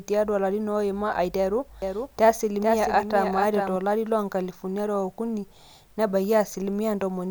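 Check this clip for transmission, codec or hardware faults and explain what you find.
One fault is present, a doubled audio track, between 1.82 and 3.76 s. Across that span the speech is heard twice: a second, full-band copy trails the original by roughly 400 ms and sits around 5 dB quieter. It carries no reverb tail or room colour, and it cuts in and out abruptly at both ends. The likely cause is the same signal arriving a second time over a slower capture path, or an edit holding two misaligned copies.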